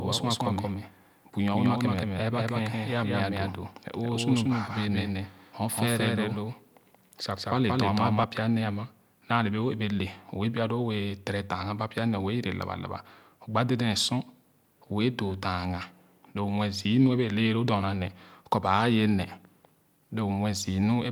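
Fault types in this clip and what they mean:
Doubled audio track: a second copy of the speech, about as loud, trails by roughly a fifth of a second with no decay, unlike echo, likely from a slower capture path, stopping abruptly at 8.24 s before "pya nee".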